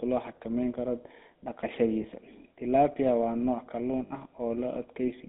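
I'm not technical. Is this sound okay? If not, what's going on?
No, not quite. The whole recording has gone through the GSM full-rate codec, the old mobile-phone voice system. It squeezes speech into a narrow phone band with nothing above about 3.7 kHz, so voices come out buzzy and gravelly throughout, and you can clearly hear it.

There are also two brief moments of lost GSM frames. Around 2.02 s, and again from 4.06 to 4.11 s, chunks of data went missing. The phone filled the gaps by repeating the last good bit, which makes a short rough, metallic ring.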